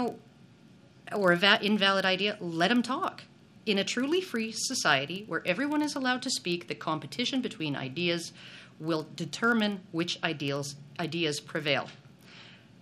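A filter restarted on every block throughout, dropping its state each time, so a level-following buzz at 25 Hz sits under the sound, one tick per block.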